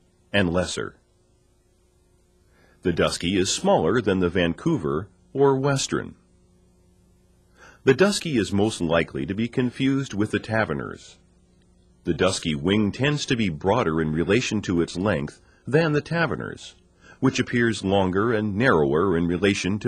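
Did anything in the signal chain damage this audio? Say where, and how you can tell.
Yes. Starting at 4.85 s, a short click or pop recurs at an even 4.97 s spacing, about four in all, with the last near 19.74 s. This is clock drift buffer slips, most likely at the driver or buffer stage between two devices running on separate clocks. A mismatch of roughly 40 ppm would fill or drain the shared buffer steadily, forcing a drop or repeat of a handful of samples each time.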